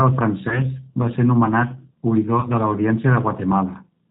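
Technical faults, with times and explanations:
Throughout: G.729 codec damage is plainly audible. The sound fits G.729A at 8 kbit/s. It rebuilds speech from a vocal tract model, a pitch predictor and a few pulses per short frame. Nothing above 4 kHz survives, so the voice sounds muffled, rough and slightly synthetic.
0.49 to 0.62 s and 2.40 to 2.48 s: VoIP packet loss concealed by the speech codec. Each event fits one lost 30 ms packet. The decoder stretches its last pitch and filter with falling gain, giving a brief buzzy tone or coloured noise that fades. The first is just before "va ser nomenat". Each effect outlasts its gap because later frames build on the damaged ones.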